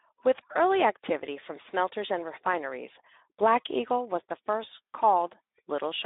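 From start to finish the speech carries Speex codec damage, clearly audible as a hoarse, noisy texture where the CELP coder runs short of bits for the excitation, which fits a bitrate near 11 kbps. The band runs from 250 Hz to 3.7 kHz, with nothing above 3.8 kHz.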